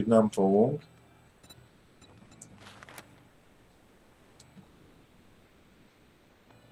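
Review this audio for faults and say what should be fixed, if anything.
Comfort noise replaces the background at 1.27–1.43 s, 1.67–2.01 s, 3.29–4.39 s and 4.63–6.49 s. The real background gives way to steady, featureless hiss, about 3 to 5 dB quieter. The likely cause is Opus discontinuous transmission, which stops sending during quiet gaps. The receiver then fills those gaps with synthetic noise. Disabling DTX on the sending encoder would keep the real background.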